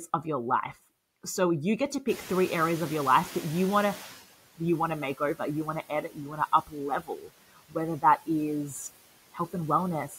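Noise suppressor artifacts run through the whole clip. The suppressor is pulling the steady background down by about 17 dB, frame by frame, so the noise dips in the gaps and creeps back up under the speech.

Around 2.0 s the room noise jumps by about 18 dB, and that's where the noise suppressor is catching up, from 2.08 to 4.21 s, between "you get to" and "you want to make". Its noise estimate is still tuned to the quieter background, so the louder noise gets through with only about 13 dB of reduction at first. It then sinks gradually over those roughly 2.1 seconds as the estimate adapts. After that the noise settles about 17 dB below the speech.

Then there's speech cut by the noise suppressor. It starts right after "you want to", at 5.89–6.39 s with up to about 12 dB of loss, and comes back at 6.63–6.75 s (about 13 dB), 7.0–7.31 s (about 18 dB) and 7.53–7.76 s (about 17 dB). A last one runs from 10.09 s to the end, with about 8 dB. 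In each case the suppressor mistook bits of speech for noise and turned them down, so those stretches sound faint or swallowed, the deepest around 7 to 7.8 s.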